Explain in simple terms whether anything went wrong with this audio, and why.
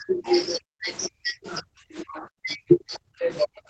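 Speech suppressed in double talk, from 0 to 0.27 s, 0.59 to 0.89 s, and 1.08 s to the end: the voice drops sharply and fades in pieces. The likely cause is an echo canceller that mistook the talker for loudspeaker echo while both sides spoke, and turned the voice down.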